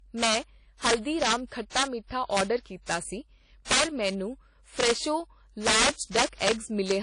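Integer overflow runs through the whole recording. The signal was driven about 10 dB past the largest integer value, and instead of being limited, the loudest samples (about 2 percent) wrap around to the opposite sign. Each of those peaks produces a sharp crack, much harder-edged than ordinary clipping.

WMA compression is also present throughout, and the codec damage is plainly audible. The speech has a ringing, washy texture with noise that rises and falls with the signal, and nothing remains above 10.1 kHz. That points to a low bitrate around 32 kbps, likely from an early WMA encoder using long transform blocks.

Pre-echo appears from 5.93 to 5.98 s. A sharp attack lands late in a transform block, so the quantisation noise sized for that loud moment spreads about 47 ms ahead of it. The result is a brief hiss before the onset, and the attack itself sounds smeared.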